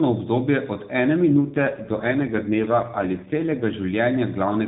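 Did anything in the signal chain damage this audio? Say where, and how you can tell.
Yes: an AMR rate drop in the codec stage. From 1.28 to 3.75 s, after "obdobje od ene", the speech turns rougher and more synthetic within the same narrow band and without gaps, which points to a switch from 12.2 to 5.9 kbps.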